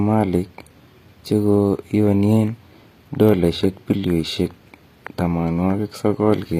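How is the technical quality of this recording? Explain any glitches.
The recording has plainly audible codec damage from start to finish, most likely HE-AAC compression. The treble is present up to a sharp ceiling at 15.3 kHz, but it isn't the original. The codec transmits only the lower band and synthesises the top by copying lower bands upward under a coarse envelope, so harmonics don't align across the crossover. S sounds come out gritty, metallic and lispy, which fits a low bitrate around 24 kbps. A plain low-pass filter would sound dull instead. This treble stays bright but false.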